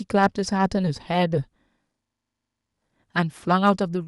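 Hard clipping appears at 0.22 to 0.26 s, where the speech peaks exceed what the signal chain can carry by about 3 dB. The waveform tops are sheared flat and the clean curve gives way to added high harmonics, heard as a short, gritty crackle on the loud syllable. Hard clipping returns at 3.65 to 3.70 s with an overload of only about 1 dB, so the flattening is shallower and the crackle fainter, a brief roughness on the peak.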